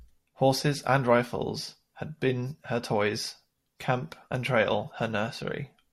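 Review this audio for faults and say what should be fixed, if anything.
No faults found in the speech; nothing needs fixing.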